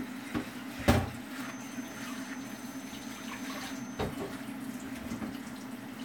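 From 1.33 to 4.12 s there's a thin feedback whistle at 6.2 kHz, sitting well under the sound and swelling and fading slowly. It's likely a speaker-to-mic loop hovering right at the edge of feedback.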